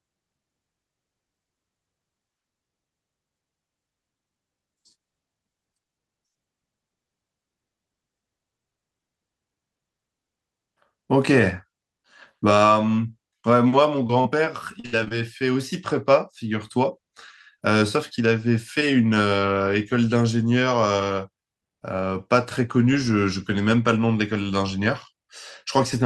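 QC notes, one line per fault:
13.41–13.45 s, short concealed packet loss: About 20 ms of audio failed to arrive in time. The decoder bridged the gap by extending the preceding sound, then blended back into the real signal. The result is a brief smear or wobble.
14.07–15.12 s, repeated packet loss (robotic sound): Seven separate gaps occur in about one second, the longest 65 ms. About a fifth of this stretch is patched guesswork. The repeated patching makes the sound choppy, with pieces missing.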